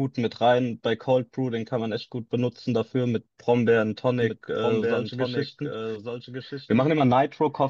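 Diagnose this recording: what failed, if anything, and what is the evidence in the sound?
A doubled audio track starts abruptly at 4.22 s. A dry copy lags about a second, about 5 dB down. Likely a second capture path.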